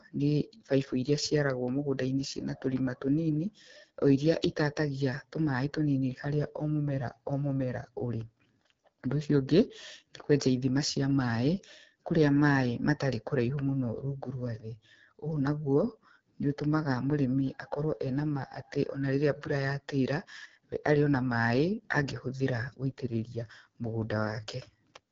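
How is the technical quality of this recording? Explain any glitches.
The technical quality is poor throughout: the speech runs through the AMR wideband (HD Voice) codec for its whole length, with plainly audible coding damage. The voice sounds rough and raspy, which fits one of the lowest AMR-WB rates, around 8.85 kbit/s. The coder models the vocal tract and pulses up to 6.4 kHz and fills the top band with shaped noise. On a spectrogram, energy stops dead near 7.5 kHz, and the upper band looks hazy instead of harmonic.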